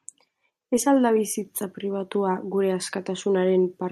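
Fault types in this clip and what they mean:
No technical faults can be heard in this speech recording. There is nothing to list under any fault type.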